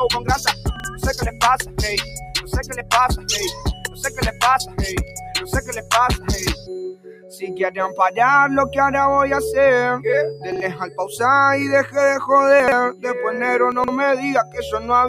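A noise suppressor built for speech stays active throughout the clip, treating steady tones, ambience and decay as noise, so the level swings by around 15 dB and held material pumps and thins while attacks pass through.

From 0.2 to 7.45 s the sound cut by the noise suppressor is most severe. Sustained parts sink by up to about 15 dB over roughly five seconds in total.

Within that stretch, at 0.76 to 0.84 s, the first case of chunks out of order occurs: a 40 ms block was written one chunk late, so it plays after its successor, and hard joins produce a brief jumbled moment. The same fault returns at 10.52 to 10.6 s, with one chunk late.

From 10.79 to 11.16 s the suppressor cuts the sound by about 11 dB.

More 40 ms chunks land out of order at 12.6 to 12.72 s, two chunks late, and at 13.72 to 13.88 s, three chunks late. Both are heard as garbled jumps.

Finally, from 14.44 to 14.79 s the suppressor drops the sound by about 11 dB.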